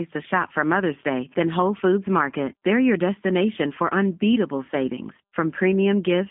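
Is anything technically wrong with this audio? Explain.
Yes. Throughout, the speech carries G.729 codec damage, consistent with an 8 kbit/s stream. The codec rebuilds speech from a vocal tract filter, a pitch predictor and sparse pulses, so the speech sounds plainly rough and synthetic, confined to roughly 150 Hz to 3.6 kHz.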